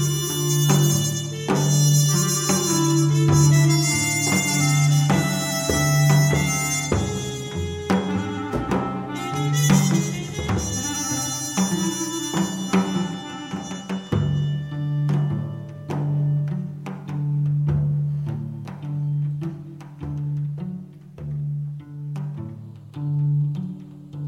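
No technical faults are audible.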